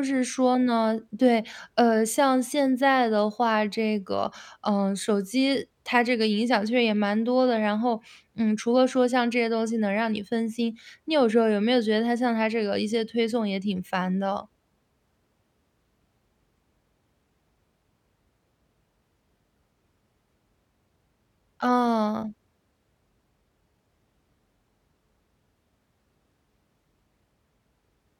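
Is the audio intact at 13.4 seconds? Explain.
Yes, at 13.4 seconds the speech plays through intact, with no audible fault at that moment.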